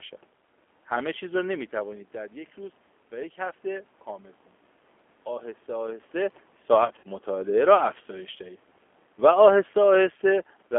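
G.729 codec, throughout: the 8 kbit/s codec rebuilds the speech from a pitch predictor and sparse pulses in a band of about 250 Hz to 3.4 kHz, so it sounds plainly rough, thin and synthetic.

VoIP packet loss concealed by the speech codec, 6.85 to 7.09 s: about 90 ms of audio went missing in gaps no longer than 30 ms, spread over 200 ms. The decoder stretched its last pitch and filter into fading buzzy or noisy fragments, and the speech stays weak afterwards.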